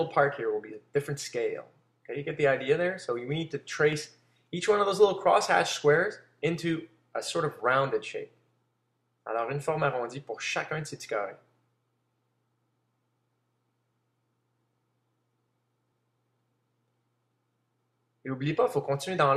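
Overlap between stream segments at 3.93 s and from 9.93 to 9.95 s: adjacent segments claimed the same stretch of time, so the player discarded about 16 and 20 ms of genuine audio. The waveform jumps, giving a brief skip roughly six seconds apart, which fits 6 s segments.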